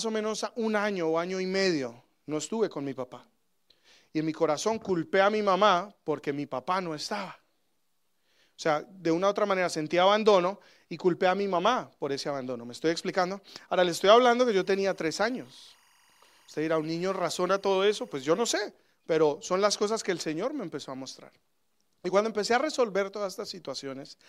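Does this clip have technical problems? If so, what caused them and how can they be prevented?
Yes. Timecode bleed appears from 14.46 to 18.52 s, starting after "le estoy hablando" and stopping before "pero son las cosas". A chirping warble sits roughly 35 dB under the speech. Linear timecode from an adjacent track or cable couples into the audio path, and its square wave flips between tones around 1 kHz and 2 kHz, with a rhythm that fits 23.976 fps code. To prevent it, keep timecode lines physically separated and shielded from audio runs, and mute unused timecode tracks.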